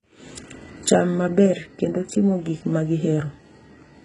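Throughout the speech, treble is cut above 11.1 kHz but sounds bright, gritty and metallic on s sounds. Unlike a dull lowpass, this points to likely HE-AAC compression near 12 kbps, copying lower bands upward.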